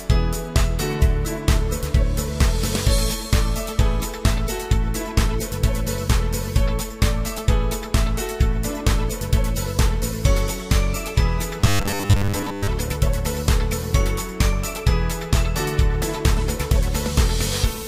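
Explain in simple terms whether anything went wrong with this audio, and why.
From 11.61 to 12.68 s the sound turns into a metallic 100 Hz buzz: robotic sound from repeated short buffers, likely from 10 ms chunks looping while fresh audio arrived late.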